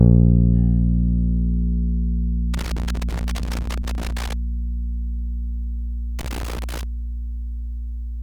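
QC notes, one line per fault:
2.54–4.34 s and 6.19–6.83 s, loose connector crackle: irregular bursts of crackle and scratching break into the sound as a worn or dirty contact rapidly makes and breaks, chopping the signal and adding sharp pops wherever DC sits on the line.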